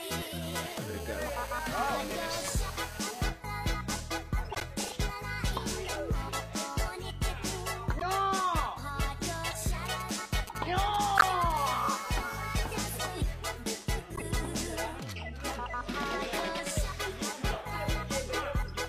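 From 0.42 to 3.23 s a hard, raspy buzz at 217 Hz, rich in harmonics, sits about 15 dB under the sound. This is GSM phone buzz: a nearby 2G handset in a call, its radio bursts rectified by the audio circuit. Over that buzz, at 1.88 to 1.90 s, comes the first corrupt frame decoded. Bit errors in a few compressed frames put energy at wrong frequencies. Further corrupt frames of this kind fall at 4.51 to 4.63 s, 7.99 to 8.03 s and 9.50 to 9.53 s. From 9.86 to 11.52 s a galloping dit-dit-dit of brief 217 Hz buzzes sits fairly close in level to the sound. These are GSM signalling bursts, short radio groups from an idle handset being rectified. Inside that stretch, at 11.16 to 11.24 s, the loudest corrupt frame bursts out. The steady call buzz returns from 11.57 to 12.98 s at about 17 dB down, and a final corrupt frame lands at 14.15 to 14.24 s.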